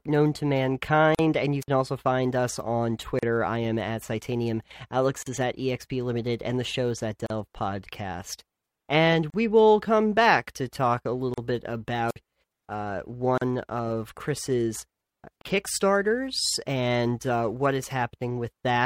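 At 1.15 s, just before "and you", comes the first gap at a join of encoded pieces. Separately encoded segments were spliced with each encoder's start delay and final-frame padding left in, opening a 41.5 ms hole. The speech then resumes exactly where it stopped, with softened edges.

At 1.61 to 1.68 s, a wireless microphone squelch dropout follows. The analogue FM radio link faded until the receiver's squelch muted the output for about 54 ms. Unlike the join gap, the hole is preceded by a rise of hiss or static.

The join gap then recurs on a strict 2.0 s cycle, at 3.19, 5.23, 7.26 (right after "and the show's at"), 9.30 (just before "will come back to"), 11.34, 13.38 and 15.41 s, each 37.6 ms long.

The second squelch dropout, at 12.08 to 12.16 s, again mutes for about 54 ms behind a burst of hiss. It falls off that regular grid, unlike the clean, evenly spaced join gaps.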